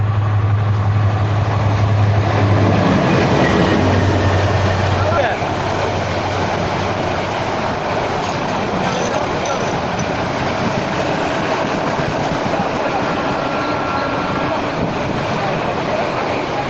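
From 7.76 s to 12.19 s there is a jitter buffer speed-up. The receiver's buffer held more audio than its target, so it repeatedly cut out short pitch-period slices, about 0.7 s in all. The audio runs at 113% speed at unchanged pitch and sounds hurried, with the call codec's cut-off near 8 kHz heard throughout.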